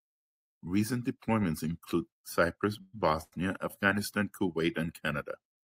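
It's a short speech clip, and from 2.81 to 2.95 s there's a call audio freeze: the last sound hangs on as a fading buzz or hiss for about 116 ms, likely because packets got held up and the jitter buffer ran dry. Then just after, at 3.23 to 3.34 s, you get a short stall from a late packet, with the sound stretched for about 91 ms before it picks up right where it left off, nothing lost.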